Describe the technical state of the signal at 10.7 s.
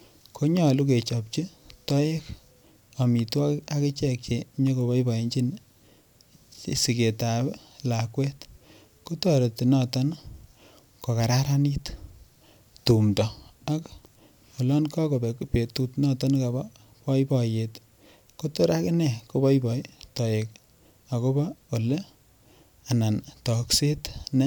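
At 10.7 s the signal is intact, with no audible fault at that point in the speech.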